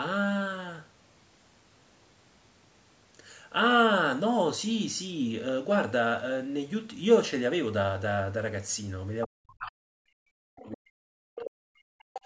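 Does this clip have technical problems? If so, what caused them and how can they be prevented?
Yes, there are two problems, both in the last few seconds. The first is speech suppressed in double talk. From 9.26 to 12.21 s the talker gets pushed down hard, by about 40 dB at the deepest point, and the suppression lasts roughly three seconds. This is likely the echo canceller hearing both sides at once, failing to tell the local talker from the loudspeaker echo, and ducking everything. A headset, or an echo canceller with better double-talk detection, would prevent it.

The second is the other side's voice leaking through, in three short scraps: 10.6 to 10.7 s at about 25 dB below the speech, then 11.39 to 11.5 s and 12.14 to 12.2 s, both at about 15 dB below. Likely the far end's audio plays from the loudspeaker, gets back into the mic, and the canceller doesn't remove all of it. Using headphones, or lowering the speaker volume and moving the mic away from it, would stop it.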